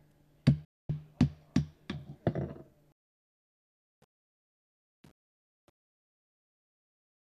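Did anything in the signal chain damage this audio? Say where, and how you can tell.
Yes. The first fault is a digital broadcast dropout, in the reception stage. At 0.65 s the sound ducks out in a very fast fade, about 3 ms long. It stays silent until 0.90 s. That is a hole of about 240 ms, which fits roughly ten lost frames. The receiver stopped getting valid frames and muted its output rather than play corrupt data. Whatever was sent in that gap is gone for good.

The second fault is truncation distortion on the fade. It sits in the sample-format conversion or volume stage. A fade-out runs from about 3 s to 7.3 s. From 2.92 s it grows grainy, and from 3.07 s to the end the grit gets worse. Each gain step was cut to too few bits, with no dither, which fits an 8-bit path. The low-level waveform turns into coarse steps.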